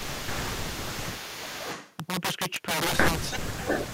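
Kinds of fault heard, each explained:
Integer overflow: The loud parts of this speech are pushed about 12 dB past the top of the integer range, and instead of being held at the limit the samples wrap around to the opposite sign, which affects roughly 7% of the samples. Each wrap is heard as a harsh crack, much sharper than clipping, on the louder syllables throughout. On a waveform the peaks flip abruptly from top to bottom, and a spectrogram shows bright broadband vertical streaks.
Speech suppressed in double talk: The talker's level drops in three places, from 0.0 to 0.93 s, 1.09 to 1.43 s and 3.3 to 3.58 s, by about 10 dB in the first two and by as much as about 30 dB in the last, where the voice nearly cuts out. This is likely an echo canceller turning down the talker because it could not separate them from the far side speaking at the same time. The waveform envelope sags or thins in these spans, and the spectrogram loses energy.
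Echo leak: A delayed copy of the speech comes back from 0.2 to 0.43 s, 0.64 to 1.09 s, 1.36 to 1.97 s and 3.6 to 3.88 s. It arrives 451 ms late in the first two and 518 ms late in the last two. It sits about 15 dB below the voice at first, about 10 dB below around 1.4 to 2.0 s, and near equal level at the end. This is likely the far side's loudspeaker sound leaking past its echo canceller. A spectrogram shows shifted repeats of the speech harmonics trailing the originals.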